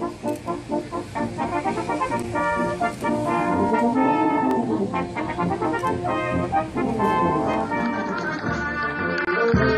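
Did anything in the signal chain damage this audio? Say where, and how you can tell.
Yes, overlapping chunks in buffered processing. Stutters at 1.49, 4.51 and 7.54 s recur every 3.0 s. Each chunk starts early, so 23 ms plays twice.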